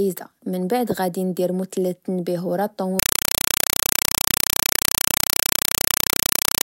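A compressed stream played as audio takes over at 2.99 s and runs to the end at 6.65 s: an undecoded AC-3 bitstream, likely around 192 kbps, is passed as samples, so each 4 ms noise burst repeats 31.25 times a second as loud, chattering static replacing the speech.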